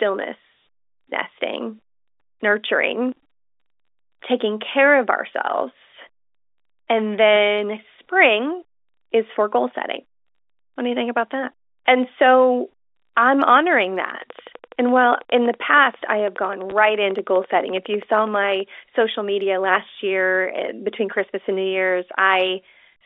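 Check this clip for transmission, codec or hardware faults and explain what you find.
Two brief dropouts of the packet loss with last packet repeated kind, heard within the G.711 telephone band that stops near 3.6 kHz. At 16.71 s and 19.94 s, about 10 ms of audio is replaced by a repeat of the preceding chunk, which points to a single lost packet each time. The waveform shows a duplicated segment with a step at its edges, visible on a spectrogram as a thin vertical broadband line.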